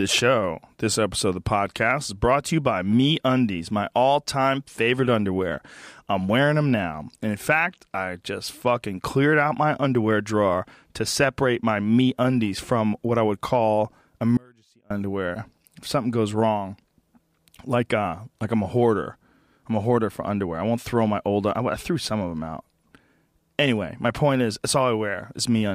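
An audio dropout to a faint residue runs from 14.37 to 14.90 s: the speech cuts abruptly, leaving faint sound roughly 30 dB down, likely from brief signal loss on a still-live path.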